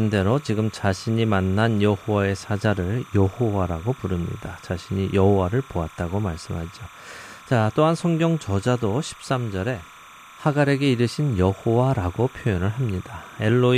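Timecode bleed runs from the start of the clip to its end. Linear timecode, running at 30 frames per second, has leaked from a neighbouring track or cable into the speech path. That code is a square wave alternating between two pitches, near 1 kHz and 2 kHz, so it sounds like a steady, chirping warble under the speech. It sits roughly 25 dB below the speech, quiet but constant.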